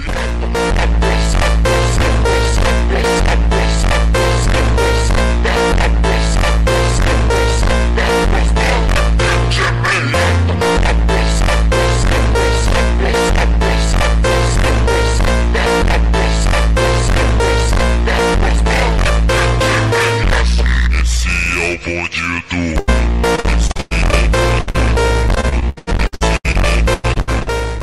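From 22.79 s right through to 27.51 s, the audio breaks up with repeated packet loss, giving that robotic sound. Data kept going missing or arriving late, and each hole got papered over by stretching the last bit of sound. Roughly a quarter of that stretch is patched this way, with the longest gap about 101 ms, so you hear a choppy stutter with chunks dropped out.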